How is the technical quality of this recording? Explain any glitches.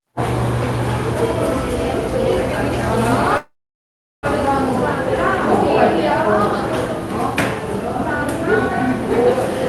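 The recording has one clear glitch, a call audio freeze. From 3.37 to 4.26 s, the sound turns into a brief fading buzz, then about 0.74 s of silence. It then resumes exactly where it left off, with nothing skipped. The likely cause is packets held up in transit, which drained the jitter buffer. The receiver stretched the last sound to fill the wait, adding about 0.86 s of delay to everything after it. The top end stops around 12 kHz throughout, as expected from a call codec such as Opus.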